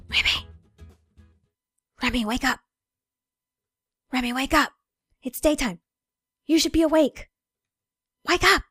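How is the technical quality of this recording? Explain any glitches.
Two brief stretches of DAB burbling mar the recording, at 2.50 to 2.55 s and 5.34 to 5.43 s. Weak reception let bit errors, somewhere near 0.15 and 0.1 percent, slip past error correction into the MP2 stream, so corrupted samples put short blips of noise into single sub-bands. The result is short bursts of noise over the sound. Unlike a dropout, nothing goes silent; the band-by-band blips also set it apart from steady codec swirl.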